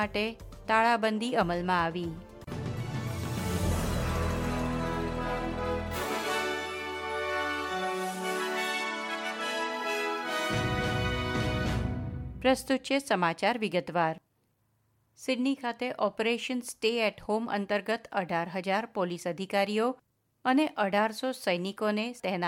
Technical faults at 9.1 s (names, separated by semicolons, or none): Bluetooth SBC bit pool drop